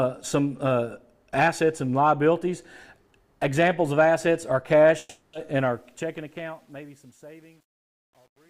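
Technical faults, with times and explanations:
4.99–5.35 s, long network dropout: about 340 ms of audio never arrived, most likely lost in transit, and the receiver filled the gap by stretching the last sound into a fading buzz. When the audio resumes at 5.35 s, that stretch of content is simply missing.
5.54–8.49 s, truncation distortion on a fade: as the fade-out that begins around 5.5 s drops toward silence, the gain stage keeps only about 9 bits and adds no dither. From 6.46 s the quiet tail turns into coarse square steps, sounding gritty.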